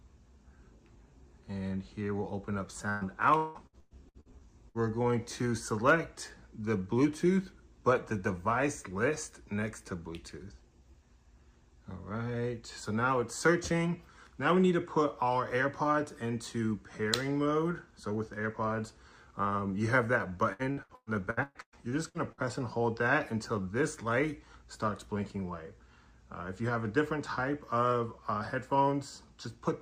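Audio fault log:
2.89–4.78 s and 20.53–22.46 s: repeated packet loss (robotic sound). Each stretch breaks up into eight or nine short holes, the longest about 176 ms and 118 ms. Each hole is filled by stretching the preceding sound, so roughly a third of each span turns choppy.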